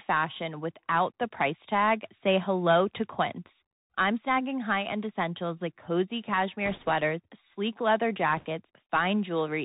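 The whole speech clip carries the Bluetooth CVSD headset codec. One bit per sample tracks the waveform, so nothing above 4 kHz survives. S sounds turn scratchy over a granular hiss, which fits a 64 kbps link.

From 6.66 to 6.90 s, after "essentials like cozy" and before "sleek leather", bit errors on the Bluetooth voice link add a rushing crackle. Near 8.37 to 8.46 s, after "sleek leather", a denser burst follows, with roughly twice the error rate.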